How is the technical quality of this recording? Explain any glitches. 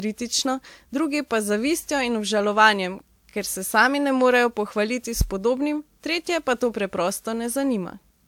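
The recording has two problems: a lossy-codec character that runs through the whole speech clip, and one low thump just past the five-second mark.

Throughout, the audio sounds swirly, smeared and a bit hollow, with softened consonant attacks. Generation loss is the likely cause. It sounds like a few rounds of WMA-style encoding at around 128 kbit/s, each pass stacking fresh quantisation noise on a shifted frame grid. There is no content above about 20.1 kHz.

From 5.21 to 5.36 s, just before "podobnim tretje pa", there's a deep phantom power thump. A supply switching on or off on the live input sends a DC step through the coupling capacitors, giving a low bump that dies away in about 32 ms.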